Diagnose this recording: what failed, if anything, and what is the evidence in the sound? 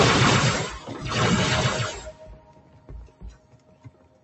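Call processing: a speech-tuned noise suppressor stayed active on non-speech sound, treating sustained content as noise. Gain swings of around 20 dB make the audio pump and thin.

The same suppressor cut sound at 2.12–2.89 s and 3.08–4.24 s by up to about 9 dB, sinking held portions and truncating decays while onsets passed.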